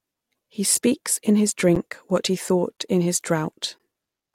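The timestamps of consecutive one-second stream segments leave small gaps, which the player fills with silence. This gap between stream segments cuts hard-edged holes into the speech at 0.75, 1.75, 2.77 and 3.78 s, lasting 6, 9, 14 and 15 ms.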